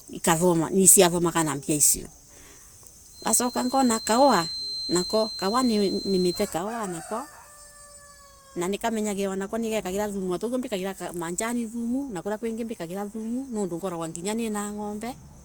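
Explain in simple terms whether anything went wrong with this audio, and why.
From 3.09 to 6.52 s a 4.1 kHz feedback whistle sits behind the speech, likely a near-feedback speaker-microphone loop. Unlike runaway howling, it stays quiet, swelling and fading slowly.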